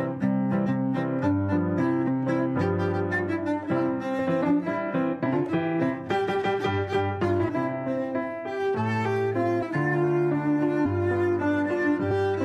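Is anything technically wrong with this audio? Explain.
Yes. The sound jumps forward abruptly eight times, at 0.65, 2.07, 4.18, 5.25, 7.48, 9.62, 10.85 and 12.10 s. Each time somewhere between a tenth and nearly half a second of material is lost. These are compressed frames skipped: whole blocks were missing or rejected as damaged by the decoder. The jump sizes fit multiples of a 23.2 ms frame.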